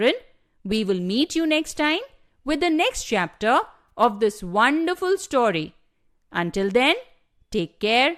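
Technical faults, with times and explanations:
3.89 s, AAC frame loss with concealment: audio about 10 ms long, fitting one low-delay frame, likely from AAC-ELD coding, was lost. The decoder patched the gap from the last good spectrum, leaving a brief smeared, noisy blip in the speech.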